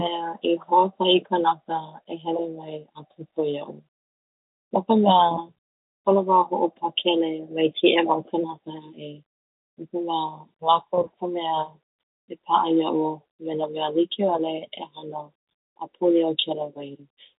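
No technical faults are audible.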